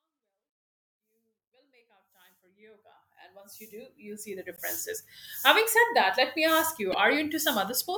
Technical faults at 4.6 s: damaged data in a compressed stream

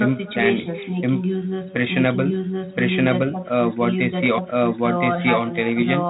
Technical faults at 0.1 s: echo with no canceller

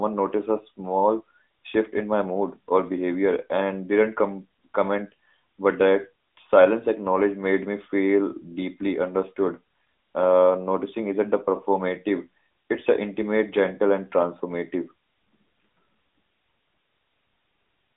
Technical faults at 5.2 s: AMR narrowband mobile codec

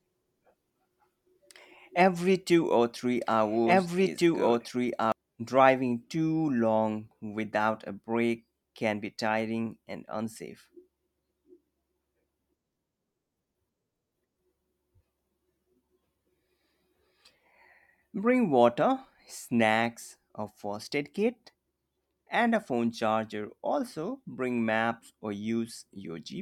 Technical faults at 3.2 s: doubled audio track

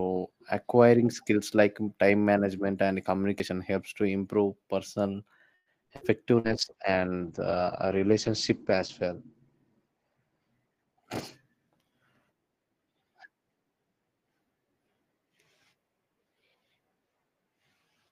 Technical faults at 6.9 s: call bitrate drop

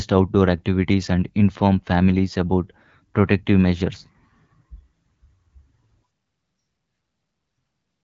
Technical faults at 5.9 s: none

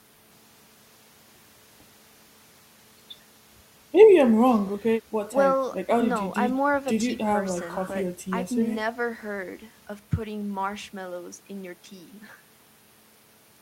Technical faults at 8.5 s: none

